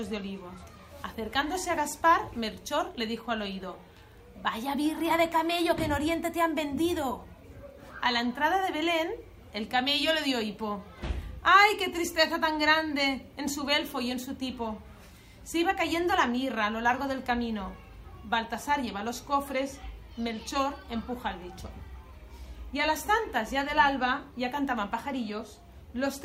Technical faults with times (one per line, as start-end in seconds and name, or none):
none